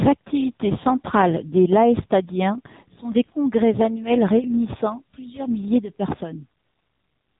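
Speech heard through the AMR narrowband mobile codec for its whole length. Nothing above 3.8 kHz survives, and the voice has the buzzy, synthetic edge of a vocal-tract model rebuilt from a few pulses per 5 ms subframe. That plainly audible damage fits a low rate of about 7.4 kbps. A plain low-pass filter would only dull the sound, and a low-rate music codec would smear it with swirly, watery artefacts. This clip keeps a clean narrowband outline but makes the voice itself sound manufactured.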